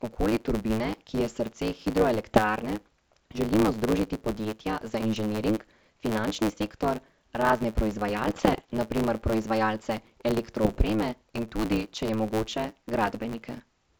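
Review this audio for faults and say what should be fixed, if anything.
Block size mismatch (truncated) runs through the whole clip. One stage hands over longer blocks than the next stage takes in, so the tail of every block is discarded. Each cut leaves a seam, and these repeat as a buzz at 109 Hz. Because a slice of audio vanishes every block, the speech plays about 1.16 times fast while keeping roughly its normal pitch. The numbers suggest 512-sample blocks being read in shorter chunks. To prevent it, make the reading stage use the same block size as the writer, or buffer the surplus samples instead of dropping them.

Bit errors on an ADPCM link occur at 2.24 to 2.42 s, at 8.27 to 8.71 s just before "na primer proizvajalce", and at 10.63 to 10.77 s. Flipped bits reach the G.722 decoder, whose wideband sound is clear outside these bursts. Each bad bit corrupts the decoder's step size and predictor, so the error rings on for milliseconds. 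This produces pops, rough bursts and brief jumps in level. The error rate is low, around half a percent to one percent. To prevent it, protect the link with error detection and concealment, or improve its signal quality.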